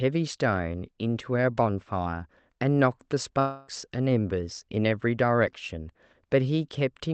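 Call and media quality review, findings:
Long network dropout, 3.39–3.70 s. Speech replaced by roughly 0.3 s of stretched, buzzy continuation of the preceding sound, fading but never reaching silence, then resuming with content skipped. Likely jitter-buffer underrun with concealment filling the gap. Unlike a brief packet-loss click, this concealment runs for tenths of a second and audibly decays. Band-limited above 8 kHz throughout, consistent with an Opus call path near 24 kbps.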